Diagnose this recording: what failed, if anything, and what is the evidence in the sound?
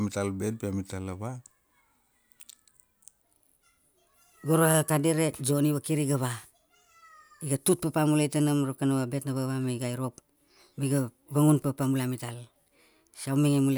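Section at the wrong speed, from 3.22 s to the end. At that point the speech abruptly runs about 1.22 times faster, and its pitch rises by roughly three semitones in the same instant, so the talker sounds higher and hurried. Because speed and pitch shift together rather than independently, this is a resampling or clock mismatch, not time-stretching. The likely stage is editing or playback, where this section was fitted to the wrong clock rate.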